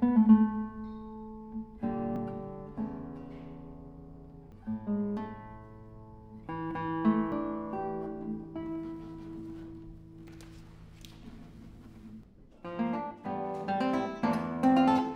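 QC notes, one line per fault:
2.16 s, 4.52 s, 7.32 s and 10.28 s, dropped buffer (overrun): each moment gives a sudden forward jump in the sound, skipping roughly 40 ms at 2.16 and 7.32 s and roughly 70 ms at 4.52 and 10.28 s, likely because samples were overwritten before being read. There is no gap. The waveform shows an abrupt step where mismatched edges join, and the spectrogram shows a thin vertical broadband line with the texture shifting across it.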